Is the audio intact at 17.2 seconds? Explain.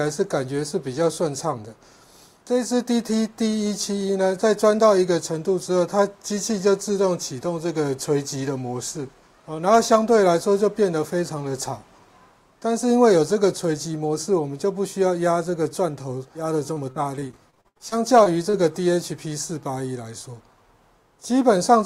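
No, 17.2 s sits inside repeated packet loss from 16.73 to 18.55 s: thirteen dropouts patched by repeating earlier sound, giving a choppy, robotic stutter.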